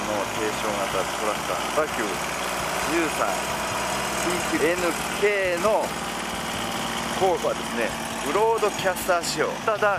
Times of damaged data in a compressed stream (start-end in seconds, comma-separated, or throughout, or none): 1.77